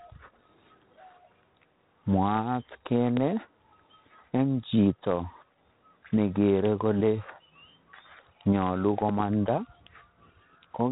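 From start to end the speech carries G.726 ADPCM damage: a harsh, rasping hiss that rises and falls with its level, pointing to the 24 kbit/s mode with three bits per sample. A spectrogram shows nothing above 3.8 kHz and a grainy noise floor tracking the speech energy.

At 3.17 to 3.19 s a single loud pop strikes, peaking around 15 dB above the speech, which continues beneath it. The cause is likely a sudden voltage pulse from a plug, switch or static discharge. The waveform shows one tall, narrow spike, and the spectrogram a thin vertical line across the band.

At 9.09 to 9.22 s a second loud pop event brings two pops in quick succession, roughly 10 dB above the speech. The waveform shows a pair of spikes, and the spectrogram two vertical stripes.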